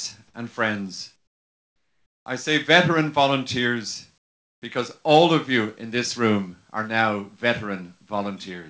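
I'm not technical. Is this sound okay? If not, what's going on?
No. Twice, from 1.16 to 2.26 s and again from 4.18 to 4.62 s, the natural background in the pauses drops away and is replaced by a flat, quieter hiss with no detail. This is comfort noise in place of the background. The sending end likely stopped transmitting during quiet moments to save data, so the receiving end filled each gap with generated noise until the sound resumed.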